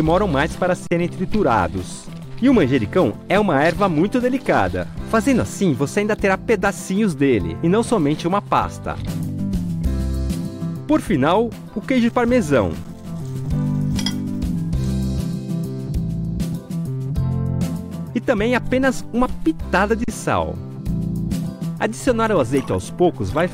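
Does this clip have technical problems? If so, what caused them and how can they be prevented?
Yes. Underrun with held sample at 0.87–0.91 s, 12.84 s and 20.04–20.08 s: the output buffer ran dry, the converter held its last value, and the sound flattened briefly before resuming where it stopped. A larger output buffer and a higher-priority audio thread would keep data arriving in time.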